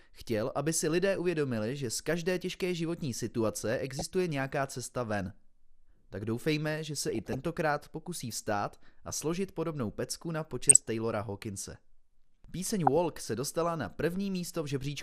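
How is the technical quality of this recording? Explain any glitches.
The quality is compromised: dull, gurgly compression throughout, plus four short bursts of burbling.

MP2 compression runs the whole way: muffled top end and grainy, watery distortion, likely from MPEG Layer II switching off upper sub-bands at a low rate, around 80 kbps.

DAB burbling hits at 3.69–4.02 s (after "z každé těžké životní", before "nějaká cesta ven"), 7.08–7.44 s, 10.69–10.88 s (after "složit podobnou pecku na") and 12.87–12.97 s (before "se dostala na"). Bit errors slip past error correction, so single sub-bands jump for up to a frame and you get short blips of noise.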